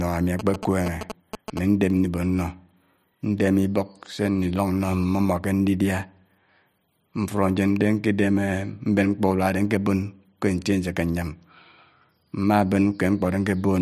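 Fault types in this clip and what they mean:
GSM signalling bursts: a nearby 2G phone's radio pulses, rectified by the audio circuit, give galloping ticks and 217 Hz buzz from 0.39 to 1.59 s, fairly loud, seen as grouped vertical striations on a spectrogram.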